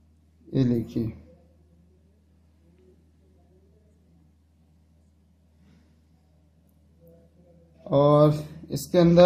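Nothing here catches the ear as a technical problem; the sound just runs along without a hitch.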